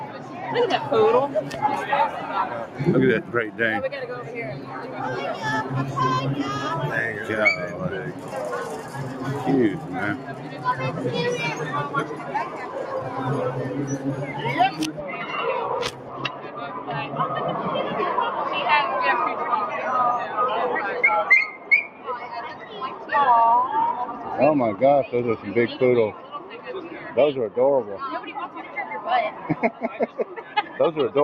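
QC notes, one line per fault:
Throughout: noise suppressor applied to music or sounds. A speech-tuned suppressor treats steady tones and tails as noise, so level swings by around 10 dB, pumping, fluttering or thinning out rather than dropping out cleanly.
0.05–0.35 s, 8.14–8.33 s, 10.18–10.65 s, 15.91–16.57 s, 21.57–22.07 s, 22.54–22.69 s, 26.13–26.59 s, 29.73–30.23 s: sound cut by the noise suppressor. Sustained parts sink by about 5 dB while attacks survive, unlike a dropout's abrupt total silence.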